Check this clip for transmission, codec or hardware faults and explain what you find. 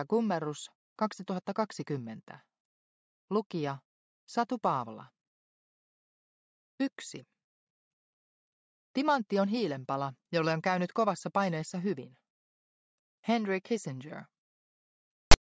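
One fault is present, right at the end of the clip. File tags played as audio occur from 15.31 to 15.34 s: a block of text metadata, of the kind normally stored in a file's tag section, has been decoded as if it were sample data. Because character bytes cluster in a narrow numeric range, they form a waveform pushed well off centre, so this brief stretch is heard as a loud, harsh rasp with abrupt edges, a sudden burst of static unrelated to the surrounding sound.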